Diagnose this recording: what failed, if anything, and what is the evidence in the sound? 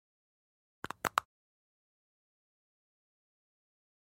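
Nothing in the recording points to a failure at any stage, so there's no fault to diagnose here.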